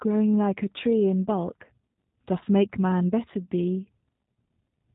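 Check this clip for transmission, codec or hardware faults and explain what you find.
The whole clip has passed through a G.729 codec, and the damage is plainly audible from start to finish. The speech was rebuilt from a vocal tract filter, a pitch predictor and a few pulses per 10 ms frame rather than sent as a waveform, which fits an 8 kbit/s coder. Nothing above 4 kHz survives, so the speech sounds narrow and dull, and the resynthesis gives it a slightly rough, synthetic buzz.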